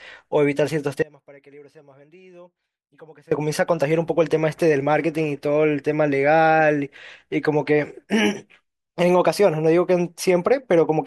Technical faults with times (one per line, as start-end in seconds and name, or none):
1.02-3.31 audio dropout to a faint residue